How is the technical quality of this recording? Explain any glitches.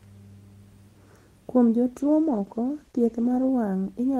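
The recording has one glitch, a call bitrate drop from 1.96 s to 3.53 s. The call's bandwidth estimate fell and the encoder was forced onto far fewer bits, consistent with a fall from about 40 kbps to about 14 kbps and a low point lasting around 1.5 s. The speech is coded more coarsely there, losing its top end and sounding muffled and rough until the bitrate recovers.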